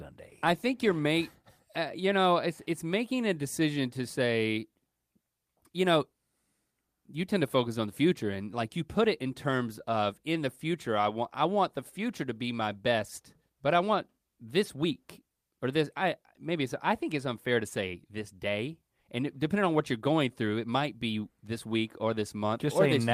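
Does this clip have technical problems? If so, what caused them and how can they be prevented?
No, the signal shows no technical faults, so there is nothing here that needs preventing.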